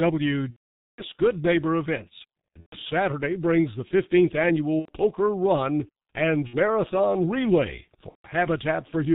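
Throughout, the speech has passed through the G.723.1 codec, and the heavy damage fits its 6.3 kbit/s mode. Audio is packed into 30 ms frames, nothing above 4 kHz survives, and the voice model adapts slowly, so the speech is muffled and hoarse and consonants smear into one another.

VoIP packet loss, concealed by the speech codec, then occurs five times. Each time the decoder has no data, so it keeps repeating its last pitch and filter at falling gain. The longest gap runs from 0.50 to 1.04 s, about 480 ms, and points to a run of sixteen lost frames. The speech there stretches into a buzzy tone or coloured noise that fades out. Shorter gaps follow at 2.60–2.76 s (about 120 ms), 4.79–4.93 s (90 ms), 6.47–6.57 s (60 ms) and 8.09–8.29 s (150 ms). Each brief smear is followed by weak or distorted speech for a moment after the packets return.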